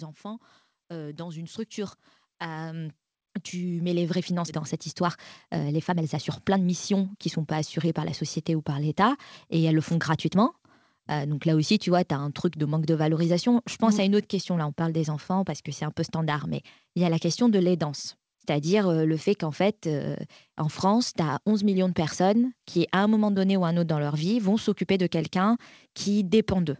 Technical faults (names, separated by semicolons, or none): automatic gain rising; skip ahead; jitter buffer speed-up